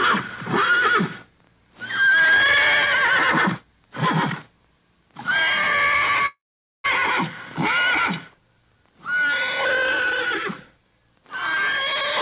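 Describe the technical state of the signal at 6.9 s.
At 6.9 s the signal is just resuming after what is likely a long network dropout, spanning 6.26 to 6.88 s, in which packets stopped arriving and the receiver had to cover the gap. It stretched the last sound into a fading buzz, then left about 460 ms of silence. About 400 ms of audio never returns, and playback comes back with its timing shifted by around a fifth of a second, still band-limited to 4 kHz, which fits G.711 mu-law.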